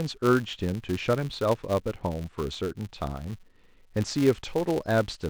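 A speech recording carrying a filter restarted on every block throughout: each block begins with a small transient, producing a buzz at 188 Hz, which fits a 256-sample buffer. Unlike mains hum, it tracks the speech level, swelling with louder passages and dropping away in pauses.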